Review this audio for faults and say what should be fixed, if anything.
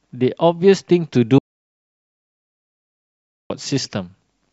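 Audio dropout to silence, 1.38 to 3.5 s: the input was likely cut off, leaving 2.12 s of flat, silent waveform and a completely blank spectrogram. Prevent it by securing connections, disabling stray mutes, and monitoring the input signal throughout the recording.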